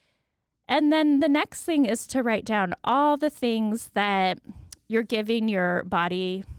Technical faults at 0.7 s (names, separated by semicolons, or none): none